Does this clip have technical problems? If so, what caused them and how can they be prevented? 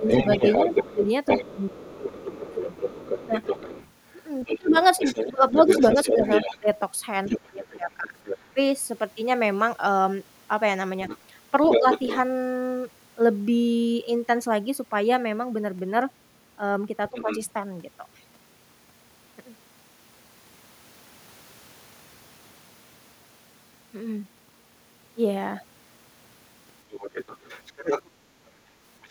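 Yes. The first fault is speech suppressed in double talk. From 0.0 to 8.57 s the talker's speech dips in pieces, about 3 s in total, falling by roughly 25 dB at worst. Shorter dips follow at 11.79 to 11.85 s, by about 5 dB, and at 17.11 to 17.29 s, by about 15 dB. Both sides were talking. The echo canceller likely could not tell near speech from loudspeaker echo, so it turned everything down. A headset or a full-duplex echo canceller prevents this.

The second fault is the other side's voice leaking through. A second voice is audible from 0.08 to 8.38 s and from 11.06 to 12.2 s, only about 5 dB below the talker. Quieter leaks, about 10 dB down, occur at 17.09 to 17.39 s and from 26.91 s to the end. The far side was playing on a loudspeaker. The echo canceller likely failed to remove it all from the microphone. Using headphones or lowering loudspeaker volume prevents this.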